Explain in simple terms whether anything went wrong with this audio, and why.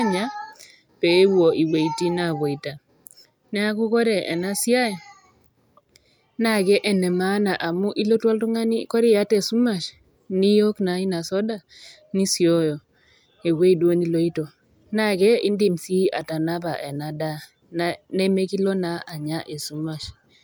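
Nothing went wrong with this audio, because no fault can be heard anywhere in it.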